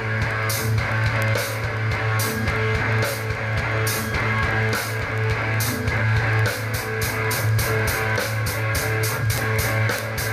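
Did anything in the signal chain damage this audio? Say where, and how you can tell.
Yes. A digital link was received on a clock not locked to the sender's, an error of a few hundred parts per million. Each slip drops or repeats one sample, producing word clock ticks roughly every 70 ms, about 150 of them, from 0.13 s to 10.29 s.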